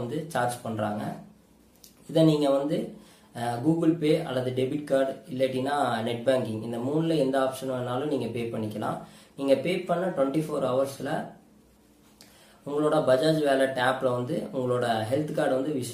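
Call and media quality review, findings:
No faults found: the signal shows no dropouts, clipping, timing glitches or level disturbances anywhere in the clip.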